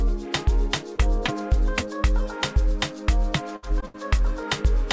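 Short concealed packet loss hits at 0.96–1.00 s and 1.26–1.30 s. About 20 ms of audio never arrived, and the decoder extended the preceding sound to cover it. Each is a brief smear or wobble. A spectrogram shows a short stretch of smeared, repeated texture, and the waveform blends back into the real audio where it resumes.

A burst of packet loss follows at 3.56–3.64 s, with about 60 ms missing. The receiver keeps the last sound going and fades it, so you hear a held buzz or hiss. On a spectrogram this looks like frozen, fading bands, and the waveform envelope decays.

Another short concealed loss at 3.80–3.84 s drops about 20 ms.

A second burst at 3.86–3.96 s loses about 80 ms, a longer fading hold before the audio jumps ahead.

Throughout, nothing appears above 8 kHz, a band edge that fits the G.722 call path.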